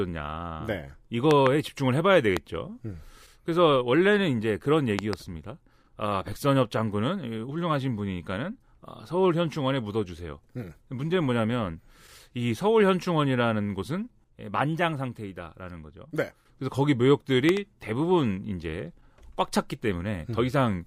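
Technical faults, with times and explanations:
1.31–1.49 s, loud pop: two sharp pops, about 20 dB above the speech. A sudden voltage pulse, likely from a plug, switch or static, adds them.
2.37–2.39 s, loud pop: a single short pop, about 15 dB above the speech, which carries on underneath. A brief voltage spike is likely the cause.
4.99–5.15 s, loud pop: a double pop, about 20 dB above the speech. Each is likely a voltage step that the later circuits shape into a thump.
17.49–17.59 s, loud pop: two quick pops, about 20 dB above the speech. They are likely a pulse from static or a driver glitch.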